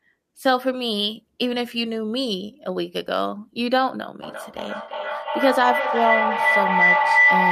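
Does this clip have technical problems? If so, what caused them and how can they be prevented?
Yes. A feedback howl near 2 kHz builds from 4.23 s to the end, peaking about 6 dB above the speech. The loudspeaker-to-microphone loop gains level each trip, with repeats roughly every 300 ms. To prevent it, join from only one device per room or use headphones.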